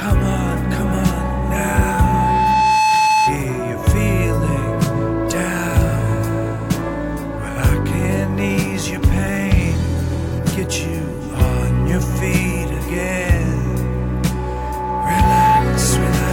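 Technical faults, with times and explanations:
1.03–3.43 s and 14.16–15.69 s, loudspeaker feedback squeal: a mic-to-speaker loop above unity gain swells an 870 Hz tone over a second or two, a few dB above the sound, seen as a thickening horizontal spectrogram line.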